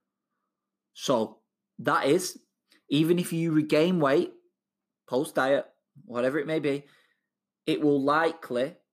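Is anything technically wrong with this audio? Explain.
No, nothing in this speech recording points to a technical problem in how the signal was captured, processed or delivered.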